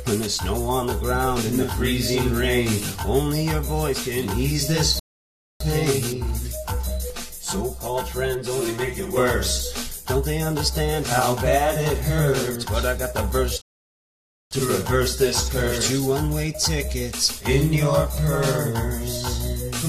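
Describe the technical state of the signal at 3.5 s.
At 3.5 s the signal is intact, with no dropout, distortion or other fault.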